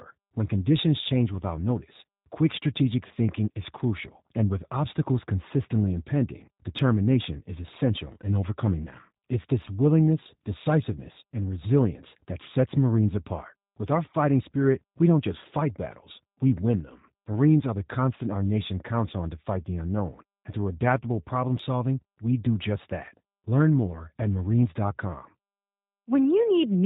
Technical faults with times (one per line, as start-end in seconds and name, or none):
0.00-26.86 G.729 codec